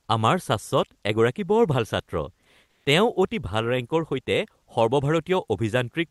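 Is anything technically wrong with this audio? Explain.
Yes: from 2.67 to 2.85 s the real background gives way to comfort noise, a flat, featureless hiss about 2 dB quieter, likely from Opus discontinuous transmission.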